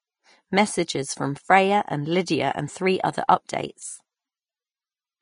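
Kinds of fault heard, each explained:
Vorbis compression: Throughout the speech, the top end sounds hissy and grainy, and nothing is present above 10.5 kHz. The codec damage is plainly audible. Fine treble detail has been replaced by noise of about the same energy, which fits a low bitrate around 28 kbps and likely comes from Vorbis coding. A plain low-pass filter would only dull the sound, whereas here the remaining highs are roughened rather than clean.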